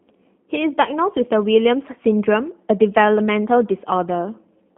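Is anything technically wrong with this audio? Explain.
Yes. The speech runs through a G.729 codec from start to finish, and the damage is plainly audible. The sound points to the G.729A variant at around 8 kbit/s. The codec does not store the waveform. It rebuilds each 10 ms frame from a vocal tract filter, a pitch predictor and a few pulses. The line band spans roughly 200 Hz to 3.4 kHz. So the voice sounds thin and boxy, with a rough, slightly synthetic buzz.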